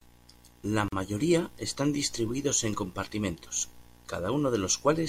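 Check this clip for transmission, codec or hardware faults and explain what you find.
One fault is present: a gap at a join of encoded pieces, from 0.88 to 0.92 s. Separately encoded segments were spliced without trimming the encoder's start-up delay and final-frame padding, leaving about 41 ms of silence in continuous speech, with smeared edges before the sound resumes where it stopped.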